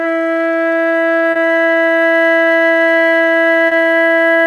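A piece of music with two brief smeared spots, one at 1.31 to 1.38 s and another at 3.67 to 3.74 s, where the sound wobbles and blurs for an instant. Both are short concealed packet loss: about 40 ms of audio failed to arrive in time each time, so the receiver stretched the preceding sound over the gap and then faded back into the real signal, leaving that momentary smear.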